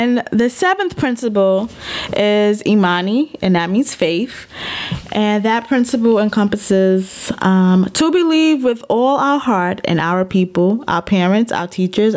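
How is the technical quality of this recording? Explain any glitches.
The recording suffers from gain pumping throughout the speech. The gain swings by roughly 25 dB, so the level breathes constantly and loud and quiet passages sound squashed together. The likely cause is microphone gain set far too high, with a fast limiter or compressor clamping down whenever the signal peaks. The call's microphone processing is also audible: the lowest bass is trimmed and nothing extends above 8 kHz, which is normal for that path.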